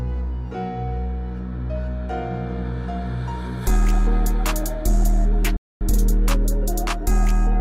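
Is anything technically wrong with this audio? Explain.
Yes. A playback stall at 5.56 to 5.81 s: the player likely ran short of data or was blocked, so the sound cuts to silence for about 240 ms before resuming.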